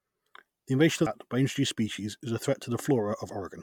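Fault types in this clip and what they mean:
Damaged data in a compressed stream: Some bytes in the encoded speech are corrupt at 1.07 s. The decoder misreads the frames there. It loses sync and searches for the next valid frame header. The result is a single brief blip in the speech.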